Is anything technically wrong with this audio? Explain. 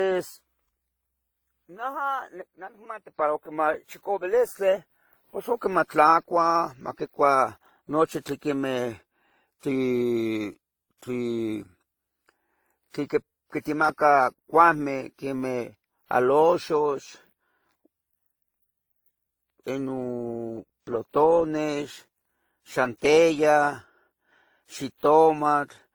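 Yes. Throughout the speech there are the mixed artefacts of transcoding between lossy codecs, likely WMA 64 kbit/s followed by Opus 24 kbit/s. Two kinds of smearing are stacked, unlike a single codec's uniform texture, and nothing sounds above 20.1 kHz.

From 1.94 to 3.17 s and from 9.68 to 12.09 s there is a drift correction step, likely clock-matching software abruptly changing the playback rate. The first plays 6.24% fast, about 105 cents sharp. The second plays 6.24% slow, about 112 cents flat. Each is a single step rather than a wavering like wow.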